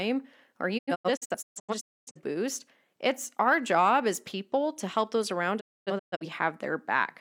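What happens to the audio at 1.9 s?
At 1.9 s the speech falls inside a digital broadcast dropout spanning 0.77 to 2.21 s. The receiver mutes on failed frames, leaving silent holes totalling 768 ms, the longest 256 ms, each with a 20 ms fade. The waveform shows flat gaps, and the spectrogram shows blank vertical bands.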